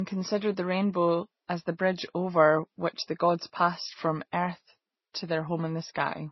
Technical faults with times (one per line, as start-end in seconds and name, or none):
0.00-6.31 transcoding between lossy codecs